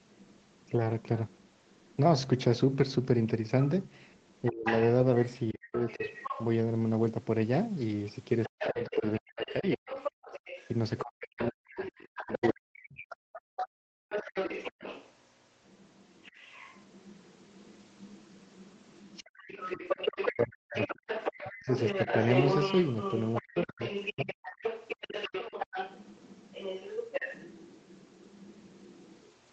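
A second, fainter voice runs underneath the main talker for the whole clip, sitting roughly 10 dB below the speech. This is the other side's voice leaking through, likely loudspeaker echo that the echo canceller failed to remove from the microphone.

From 4.50 to 12.97 s the talker's speech repeatedly dips and breaks up, falling by around 40 dB at its deepest and losing about three seconds in total. This is speech suppressed in double talk: with both sides talking at once, the canceller likely could not tell the talker from the echo and turned both down.

Between 13.25 and 14.09 s the room sound drops away, by about 39 dB at its deepest, for a little under a second in all, then returns. This is background gated by the echo canceller, which clamped the microphone hard while the loudspeaker was playing.

From 16.31 to 16.35 s there is a brief notch in the speech, around 20 dB deep. It is the same speech suppressed in double talk, likely the canceller reacting to overlapping audio for only a moment.

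From 20.33 to 24.37 s the speech again drops out in pieces, reaching around 40 dB down and costing about a second in total. This is speech suppressed in double talk, likely triggered once more by both sides speaking together.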